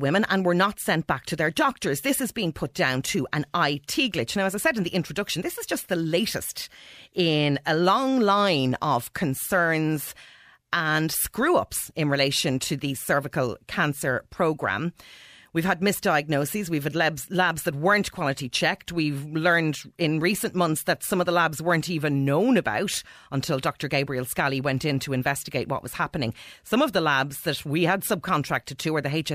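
No technical faults can be heard anywhere in the speech.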